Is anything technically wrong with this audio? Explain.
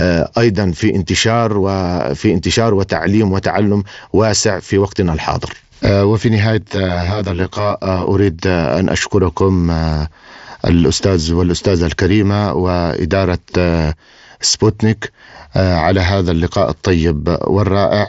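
Yes. From 6.62 to 8.07 s there is channel delay (comb filtering): one channel arrives about 20 ms late and the two are summed to mono, cancelling shared content at evenly spaced frequencies from around 20 Hz upward. It sounds rough or slightly doubled. A spectrogram shows closely spaced horizontal notch stripes, and the waveform shows smeared, echoed onsets. The mSBC headset path's band limit near 7.7 kHz is visible as an empty top band throughout.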